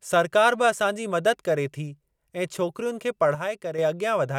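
A speech recording in which one channel drops out, likely a stereo channel lost briefly from 3.35 to 3.78 s, just after "थी ऐं छोकिरियुनि खे", so the mono sum abruptly falls by about 6 dB before recovering.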